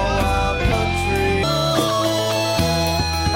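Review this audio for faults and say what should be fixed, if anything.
From 1.43 s to 3.35 s, a section at the wrong speed plays 1.67 times too fast and about ten semitones high, likely because of a mismatched sample clock. To prevent it, confirm that each segment's sample rate matches the session clock before editing or exporting.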